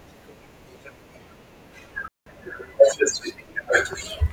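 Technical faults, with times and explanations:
2.08 to 2.26 s, digital wireless dropout: the speech cuts to near silence for about 185 ms, then returns at full level. The hole is clean. No hiss, crackle or burst of noise comes before or after it. The wireless link lost too much data to rebuild the signal, so the receiver muted instead of passing on damaged audio. A very short fade at each edge keeps the gap free of clicks.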